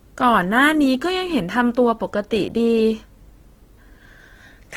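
Throughout, a starved encoder, likely Opus compression in CELT mode at around 16 kbps, fills bands with folded or noisy content, leaving the speech rough and grainy up to 20.2 kHz.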